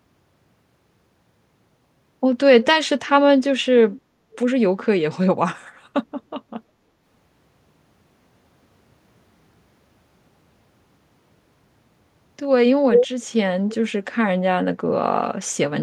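At 3.91 s, 4.32 s, 12.92 s and 13.69 s, an echo leak returns the speech about 312 ms late. It is faint at first but briefly louder than the talker at 12.92 s, likely a loudspeaker leaking past an echo canceller. Unlike reverb, each is a distinct, same-lag repeat.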